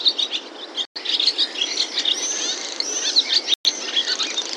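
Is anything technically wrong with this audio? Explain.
Yes. Bluetooth stalls at 0.85 s and 3.54 s: the sound drops to silence for about 0.11 s each time, likely because interference delayed packets and the headphone buffer ran dry.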